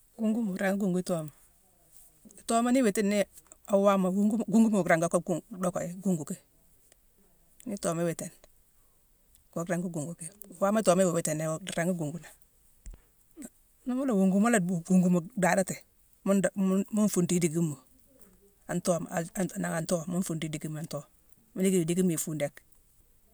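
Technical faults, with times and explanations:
Nothing to flag here: I didn't hear any technical faults anywhere in this speech recording.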